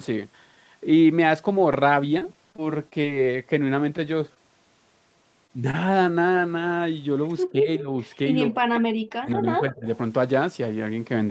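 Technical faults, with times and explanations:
2.19–3.05 s, repeated packet loss (robotic sound): seven short gaps, none longer than about 20 ms, break up this stretch. Each one is filled by extending the preceding sound, so roughly an eighth of the span is synthetic. The result is a choppy texture with small pieces missing.
4.34–4.38 s, 5.47–5.51 s and 5.71–5.75 s, short concealed packet loss: in each spot about 20 ms of audio arrived too late to decode. The receiver bridged the hole by continuing the last sound before blending back, leaving a brief smear or wobble where a short sound can thin out.
7.52–7.89 s, 8.49–8.85 s and 9.21–9.87 s, speech suppressed in double talk: the level sags, by about 10 dB in the first stretch and about 25 dB in the later two. This is likely an echo canceller turning the signal down while both sides talked at once.
7.77–7.82 s and 9.70–9.74 s, echo leak: faint scraps of a copy of the sound return about 194 ms late, roughly 15 and 20 dB below the direct level. 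These are likely loudspeaker pickup at the far end that the echo canceller failed to fully remove and sent back.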